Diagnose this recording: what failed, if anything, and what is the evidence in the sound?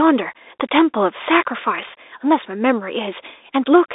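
Muffled speech with scratchy s sounds and granular hiss throughout, nothing above 3.8 kHz: a codec-stage Bluetooth CVSD headset codec, its one-bit adaptive steps outrun by loud highs.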